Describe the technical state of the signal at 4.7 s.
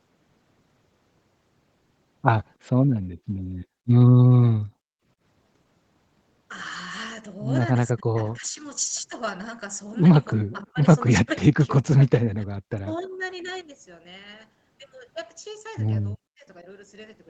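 At 4.7 s the speech is intact, with no fault at that moment, only the ordinary band limit of call microphone processing, which leaves nothing above 8 kHz.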